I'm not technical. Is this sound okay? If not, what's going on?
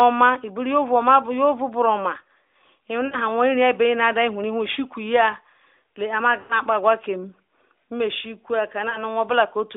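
No. You can hear lost AMR speech frames at 3.06–3.17, 4.72–4.77, 6.40–6.57 and 8.90–8.98 seconds. Radio errors spoiled bits of the call. The phone filled each gap by repeating the last sound more quietly. So speech smears briefly and fades. The 6.40 gap is longest.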